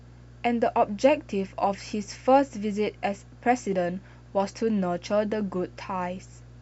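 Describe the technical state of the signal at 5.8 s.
Mains hum is present at 5.8 s, as it is through the entire clip. Power-line current leaks into the signal path, likely through a ground loop or nearby transformer, adding a steady 60 Hz drone with low harmonics, sitting roughly 25 dB beneath the speech.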